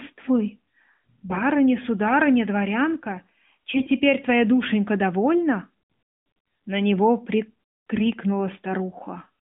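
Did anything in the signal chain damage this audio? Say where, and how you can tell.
Yes, AMR bit errors on the network link, heard as three brief hoarse, gargly bursts at 1.29 to 1.43 s (just before "сударыня дворянка"), 3.76 to 3.89 s (between "сударыня дворянка" and "твоя душенька довольна"), and 7.96 to 8.03 s. Each spans a few 20 ms frames. Pitch and loudness hold, but flipped low-priority bits put excitation pulses in the wrong places and skew the fine gain and spectral values. On a spectrogram, harmonics inside the narrowband 150 Hz to 3.6 kHz band turn to grainy smear, and the waveform shows rough, jagged cycles at steady level.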